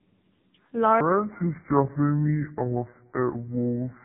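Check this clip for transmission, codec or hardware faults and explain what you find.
Two faults are present: tandem speech coding across the whole clip, and a section at the wrong speed from 1.01 s to the end.

The tandem speech coding runs throughout. The speech passed through two speech codecs in succession, GSM full rate at 13 kbit/s, then G.711 A-law, then AMR-NB at 6.7 kbit/s, with each coder re-encoding the already damaged output of the one before. The result is rough, muffled and warbly speech. On a spectrogram, nothing appears above about 4 kHz, and the harmonics look smeared and blotchy rather than cleanly striated.

The section at the wrong speed begins at 1.01 s and lasts to the end of the clip. From that point the audio plays at 0.621 times its original speed, so it sounds slowed and about seven semitones lower, deep and dragging. The likely cause is playback or editing against the wrong clock. 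On a spectrogram, the harmonic stack drops abruptly at 1.01 s and the syllables stretch out in time. The waveform's envelopes lengthen accordingly.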